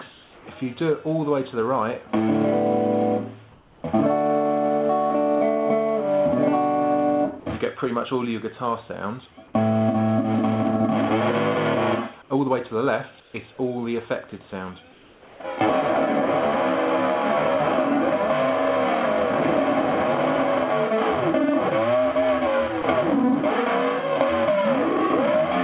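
Comfort noise in place of the background turns up at 0.12 to 0.46 s, 3.52 to 3.84 s, 12.22 to 12.3 s, 13.2 to 13.34 s and 14.92 to 15.4 s. Each time the real background, sitting roughly 25 to 32 dB under the loud parts, gets swapped for smoother synthetic noise about 2 to 5 dB quieter. That's likely discontinuous transmission, with the receiver filling pauses while the sender goes quiet. At 22.82 s there's sound dropped by the voice detector: a 20 ms sliver of real audio gives way to steady noise, likely because the detector mistook it for background, all within a call path that passes nothing above 4 kHz.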